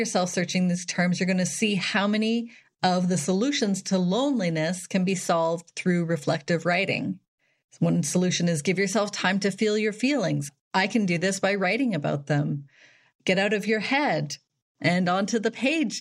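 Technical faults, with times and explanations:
Nothing technical stands out in this speech recording; there's no fault to list.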